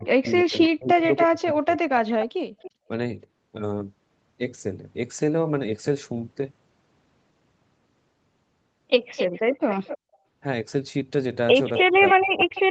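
From the start to 2.89 s the voice dips and breaks up in pieces, in total roughly a second and a half, falling at its deepest by about 40 dB. This is speech suppressed in double talk, likely caused by the echo canceller turning down the near talker along with the loudspeaker echo while both sides spoke.

Overlapping this, from 0.26 to 1.22 s, a delayed copy of the voice comes back about 279 ms late and about 10 dB below it. This is an echo leak, likely from a loudspeaker echo that the far end's canceller did not fully remove. It returns from 2.09 to 2.71 s at the same delay, about 15 dB down. A discrete copy this late can't be room reverberation, which would smear smoothly into a tail rather than repeat as a separate copy.

The echo leak appears again from 9.16 to 9.98 s and from 11.75 s to the end, both times about 261 ms late and about 10 dB down.

From 11.83 s to the end, speech is suppressed in double talk again, roughly 0.7 s in total, falling at its deepest by about 35 dB.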